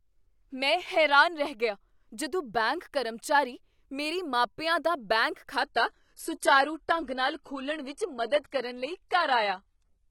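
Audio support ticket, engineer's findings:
Adaptive stream dropped to a lower bitrate from 5.61 s through the end. The quality step is abrupt with no gap. Top end is gone above 11.8 kHz, with more codec smearing. That sounds like the player switching to a low-rate rendition, which fits a jump from AAC-LC around 96 kbit/s down to HE-AAC around 16 kbit/s when throughput sagged.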